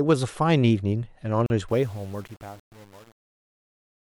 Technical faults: gap at a join of encoded pieces; truncation distortion on a fade

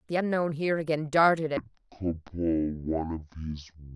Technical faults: section at the wrong speed

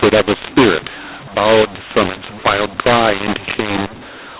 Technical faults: mu-law and A-law mixed up

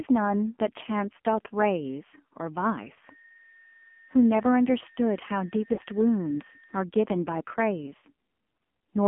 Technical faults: AMR narrowband mobile codec; lost AMR speech frames

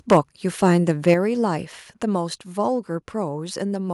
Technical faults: microphone overload; microphone volume stepped down

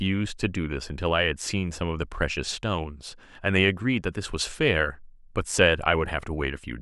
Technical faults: none

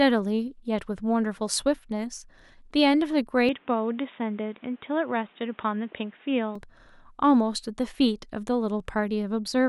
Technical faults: input switched to a poorer device

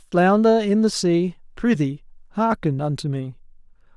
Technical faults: repeated buffer

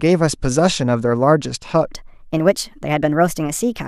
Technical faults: section at the wrong speed

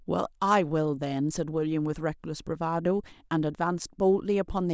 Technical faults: none

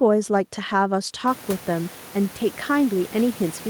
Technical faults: none

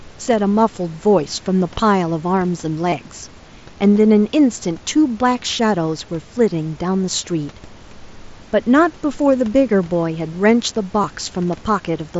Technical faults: concealed Bluetooth headset packet loss

